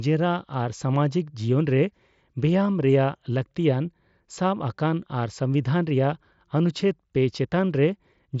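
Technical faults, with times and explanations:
Nothing here counts as a technical fault; the speech comes over a wideband Bluetooth headset link using mSBC, with its top end stopping at about 8 kHz.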